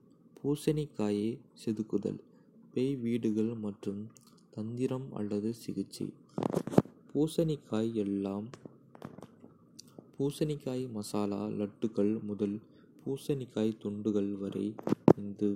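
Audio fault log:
14.65 s, dropped samples: a single sharp click in the speech, visible as a thin vertical line across the spectrum. The likely cause is the loss of about one sample, making the waveform jump abruptly to a later value. The gap is far too brief to remove any audible sound.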